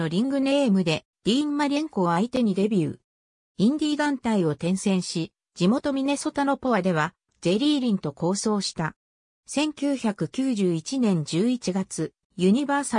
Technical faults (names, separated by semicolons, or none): none